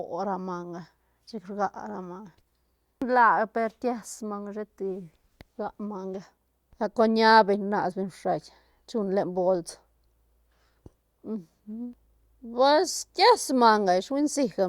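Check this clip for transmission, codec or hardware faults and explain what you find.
No transmission, codec or hardware faults are audible anywhere in this speech recording.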